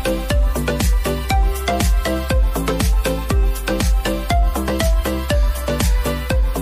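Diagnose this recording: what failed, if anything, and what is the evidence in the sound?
Likely MP3 compression at the codec stage: throughout, a watery swirl with smeared attacks persists, which fits a starved bitrate near 64 kbps.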